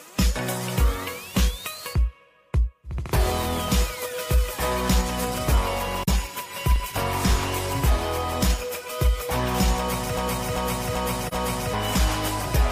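AAC frame loss with muting appears first, from 6.03 to 6.08 s. The decoder filled a gap of about 43 ms, which fits one missing frame, with silence. The overlapping windows fade the sound out and back in, leaving a brief dip.

A filter restarted on every block follows, from 6.28 to 7.71 s. Each block starts from a cleared filter state, so each begins with a small transient. Those transients recur at 25 Hz, producing a steady tick or low buzz that rises and falls with the signal level.

A broken-record loop runs from 10.17 to 11.74 s. A 391 ms fragment repeats exactly, back to back, four times, and the audio that belonged in that span never plays. The likely cause is a stalled player, encoder or stream resending its last held piece.

A second AAC frame loss with muting falls inside that loop, from 11.27 to 11.34 s. Another gap of about 43 ms is softly faded to silence and back.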